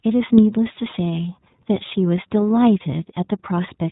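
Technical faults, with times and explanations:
Throughout, iLBC codec: the speech is cut off above 4 kHz and has a plainly rough, slightly synthetic grain that fits 20 ms frames coded independently at 15.2 kbps. Simple band-limiting would leave a dull but clean sound, without this rough, frame-by-frame texture.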